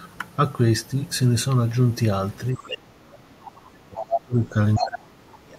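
At 2.54 s both ends of the call are talking together, and the echo canceller has likely mistaken the near talker for loudspeaker echo. It pulls the whole signal down, giving speech suppressed in double talk. Until 4.56 s the talker's speech dips and breaks up, falling by as much as about 30 dB at its deepest, so whole stretches thin out or drop away for around two seconds.

Around that window the canceller is also likely failing to remove all of the far end's loudspeaker sound from the microphone. The other side's voice leaking through shows up first from 2.55 to 2.76 s, about 10 dB below the talker, as a quieter second voice. It returns from 3.96 to 4.21 s at roughly the same level as the talker, competing with it directly. A third scrap follows from 4.75 to 4.87 s, about 5 dB down.

The same mistaken gain cut starts again at 4.78 s, and the speech is suppressed in double talk once more through 5.57 s. 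The voice sinks by up to about 30 dB and breaks into pieces for most of the last 0.7 s.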